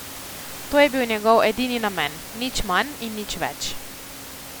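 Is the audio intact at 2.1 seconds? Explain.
Yes, the audio is intact at 2.1 s; the only thing beneath the speech there is the room's own background noise, about 15 dB below it, which belongs to the recording rather than being a fault.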